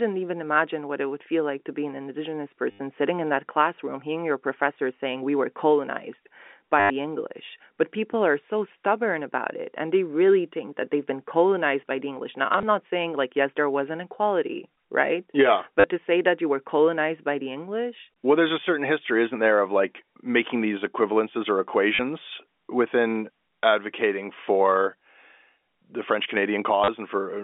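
Packet loss with the last packet repeated occurs at 2.71–2.79 s, 6.8–6.9 s, 12.53–12.63 s, 15.80–15.84 s, 21.95–21.99 s and 26.84–26.88 s. At each gap the receiver kept replaying the most recent packet until fresh audio arrived. The repeats seldom line up with the speech's pitch cycles, and longer runs buzz at about 100 Hz, which fits 10 ms packets. This produces brief robotic stutters. The longest are the 100 ms and 80 ms gaps, while the 12.53 s event is a scattered 50 ms of loss in runs of up to 20 ms. All of this sits within the narrow 250 Hz to 3.6 kHz telephone band of the G.711 A-law line.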